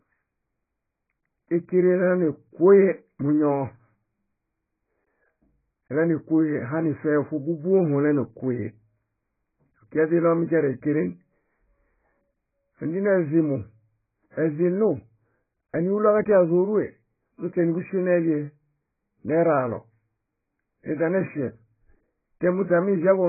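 Throughout the speech, heavy AAC compression, likely near 12 kbps, removes everything above 2.5 kHz, leaving the sound dull and smeared.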